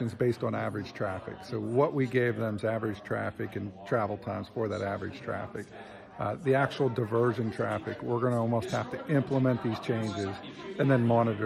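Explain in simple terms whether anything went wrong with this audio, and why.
Nothing went wrong here; there are no dropouts, clicks, distortion or other faults at any point in the recording.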